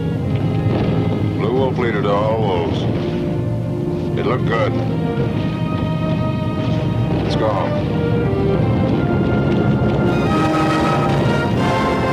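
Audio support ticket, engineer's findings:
Pre-emphasis left on, 10.07 s to end (12.13 s). Sudden thin, bright, sibilant top end; treble about 8 dB hot at 10 kHz relative to 1 kHz. Shelf shape fits CD 50/15 µs emphasis with de-emphasis not applied in playback chain. Unlike a broad EQ boost, the lift is a fixed shelf starting around 3 kHz, switching in abruptly near the end of the clip.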